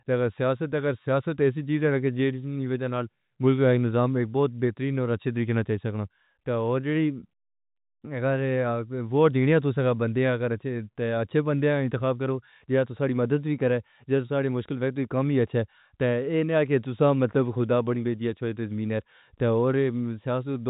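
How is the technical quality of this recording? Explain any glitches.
No glitches to report: the speech sits in a standard telephone channel, G.711 mu-law at 64 kbps, with the band stopping near 3.8 kHz as that format dictates and its coding noise faint at most.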